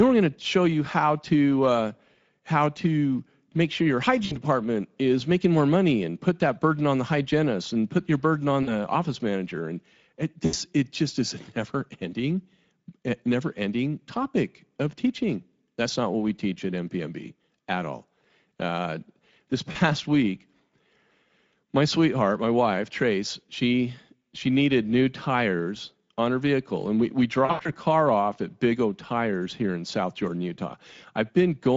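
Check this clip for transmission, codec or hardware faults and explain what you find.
The speech carries Speex codec damage throughout, plainly audible. At about 16.8 kbps the encoder has too few bits to model the excitation well. Voices sound rough, hoarse and noisy. Any content above 4 kHz is a shaped noise fill, not real detail.

There are five dropouts with VoIP packet loss concealed by the speech codec. They fall at 4.25 s after "to make sure your", lasting about 60 ms. At 8.63 s after "put your burden on", about 40 ms. At 10.45 s before "it just is a", about 80 ms. At 19.71 s, about 40 ms. Then 27.45 to 27.69 s, scattered losses totalling 140 ms, longest 80 ms. The decoder repeats its last pitch and filter while fading the gain. Each gap smears into a fading buzzy or noisy tone. The following sound stays weak briefly.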